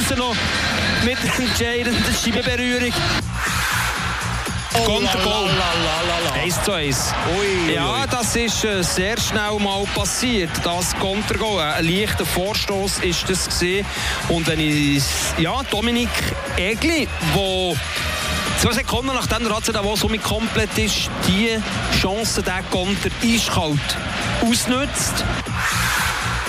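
At 1.26 to 1.34 s, 2.36 to 2.38 s, 10.59 to 10.63 s and 19.74 s, a corrupt frame is decoded. Damaged compressed data puts energy at wrong frequencies, giving brief chirps, squeaks, blips or bursts of noise. The first two are loud, the last two quieter.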